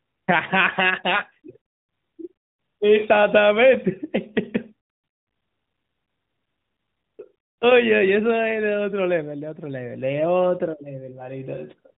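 Speech, with no technical faults to report.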